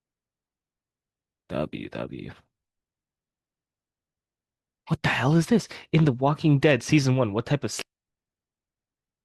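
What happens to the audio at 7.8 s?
At 7.81 to 7.84 s the speech jumps ahead with a brief blip, likely a stream segment skipped, showing as an abrupt waveform discontinuity and a thin vertical spectrogram stripe.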